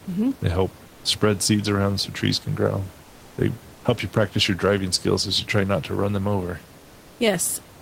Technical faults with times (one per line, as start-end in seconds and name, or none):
0.91-1.03 comfort noise in place of the background
3.07-3.37 comfort noise in place of the background
6.79-7.15 comfort noise in place of the background